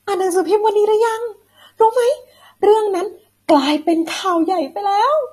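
Heavy AAC compression likely runs through the whole speech recording, with the encoder starving the spectrum of bits, as at a low bitrate near 32 kbps. Nothing survives above 13.6 kHz, so the speech sounds dull and smeared, with a plainly audible warbling, fizzy texture on sibilants.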